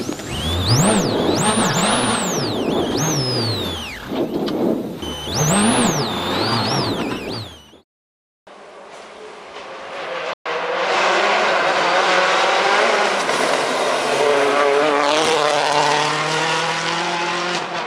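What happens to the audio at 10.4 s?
At 10.33 s the output drops into a playback stall: the sound halts mid-flow and the line goes silent for about 120 ms, resuming at 10.46 s. The likely cause is the playback buffer running dry, or the audio thread being blocked briefly, so nothing reached the output until the player recovered and carried on.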